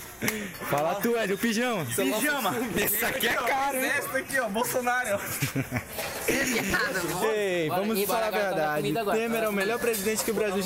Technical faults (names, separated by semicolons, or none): processor overload crackle